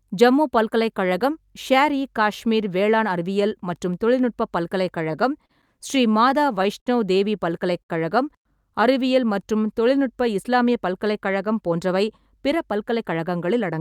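From 4.96 to 5.51 s, just after "வேளாண் அறிவியல் மற்றும் தொழில்நுட்ப", the speech catches and drags in four small hitches. Again from 5.95 to 6.88 s it does so six times, with the longest hold lasting 60 ms. These are repeated stalls (stutter): packets kept arriving behind schedule, so the jitter buffer emptied again and again. Each time, the receiver filled the gap by carrying the last sound forward, 56 ms in the first stretch and 108 ms in the second. Nothing is lost, but the flow jerks.

At 7.82 to 7.91 s a single sound is held about 68 ms too long, with a slight buzz or dip. This is a short stall from a late packet. One packet missed its playout time, the buffer ran dry, and the receiver stretched what it had until the packet turned up. It then resumed from the same point, so the timeline slips back by that amount.

From 8.94 to 9.80 s, leading into "தொழில்நுட்ப இஸ்லாமிய பல்கலைக்கழகம்", the speech slows to 94% of its normal rate with no drop in pitch, so the sounds feel drawn out. 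This is a jitter buffer slow-down. With its reserve low, the receiver repeated single pitch periods and scraps of pause many times over, adding 59 ms to rebuild its margin.

After "தொழில்நுட்ப இஸ்லாமிய பல்கலைக்கழகம்", from 11.71 s to the end at 13.81 s, the delivery turns hurried. It runs at 106% speed, still at the same pitch. This is a jitter buffer speed-up. The buffer held more audio than its target, so the receiver trimmed off tiny slices of a pitch period or a few, over and over, cutting roughly 150 ms in total to bring the delay down.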